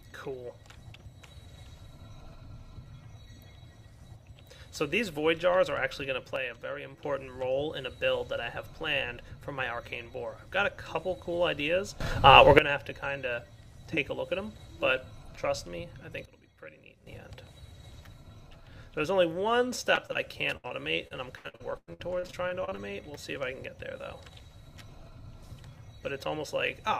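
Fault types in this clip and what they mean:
Sudden gain jump: Level and background noise step together, likely from gain changed without a ramp: down about 6 dB at 6.36 to 7.04 s, up about 16 dB at 12.01 to 12.59 s, down about 12 dB at 16.25 to 17.07 s. The waveform envelope shows abrupt rectangular steps, and the spectrogram brightens or darkens uniformly.
Short concealed packet loss: About 20 ms went missing at 19.95, 20.07, 20.13 and 20.68 s. Each hole is patched by extending the preceding sound for 13 to 25 ms, heard as a tiny smear or wobble. Spectrograms show brief smeared or flattened slivers where detail should change.
Burst of packet loss: At 20.57 s about 60 ms is lost in a row. The receiver stretches the last sound for about 68 ms while fading it, then jumps ahead. The waveform shows a decaying plateau, and the spectrogram shows frozen, fading bands before an abrupt resumption.
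Repeated packet loss (robotic sound): From 21.08 to 22.79 s, 13 separate holes remove about 0.52 s, the longest 97 ms, with roughly 30% of the stretch synthesized. The result is choppy and stuttering. The spectrogram shows a striped pattern of repeated, smeared patches alternating with real audio.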